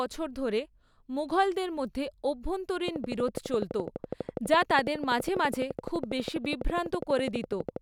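A steady ticking rides over this speech recording from 2.88 s to 7.77 s, a train of clicks at a regular 12.1 per second, around seventy in all, each sharp pulse much like the last and peaking roughly 15 dB above the speech, so the ticks stand out clearly even through the pauses. Such evenly spaced, identical pulses are likely interference from nearby equipment or a faulty connection or power supply injecting a repeating spike into the signal path.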